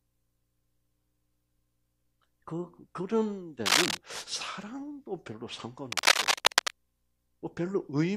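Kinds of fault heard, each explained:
Cable scratch noise: a worn cable or connector likely shifting, its contact resistance jumping, throws dense ragged scratching well above the sound at 3.66–3.97 s and 5.9–6.7 s.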